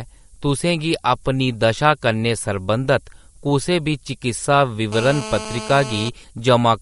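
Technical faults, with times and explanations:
Throughout: low bit depth with noise shaping, a steady thin hiss climbing toward the treble, roughly 30 dB below the speech, which fits a 9-bit signal with its rounding error pushed upward.
Throughout: watery, swirly texture with smeared consonants and nothing above 11.2 kHz, likely MP3 compression at a low bitrate around 48 kbps; unlike hiss, the damage swirls with the signal.
4.92 to 6.09 s: GSM phone buzz, a hard raspy 217 Hz buzz rich in harmonics at about -11 dB, held steady as during a call and unrelated to the speech.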